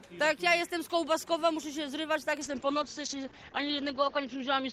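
At 2.41 s a call bitrate drop sets in and lasts to the end. The top end narrows from 20 kHz to 8 kHz and the sound turns rough and watery, which fits a fall from about 48 to 8 kbps, bottoming out for 1.76 s. It is continuous, without the gaps of packet loss.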